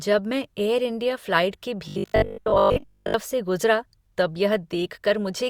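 At 1.51 s, just after "मैं एयर इंडिया", pre-echo appears: codec noise from a sharp attack spreads about 19 ms ahead of it, heard as brief hiss before a softened onset. From 1.88 to 3.14 s the speech turns into a rigid 50 Hz robotic buzz, likely from repeated 20 ms buffers replacing most of the real audio.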